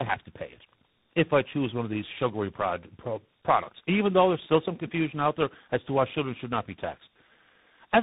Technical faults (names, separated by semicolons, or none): tandem speech coding